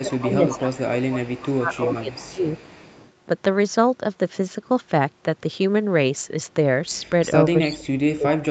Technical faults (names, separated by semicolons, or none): echo leak; speech suppressed in double talk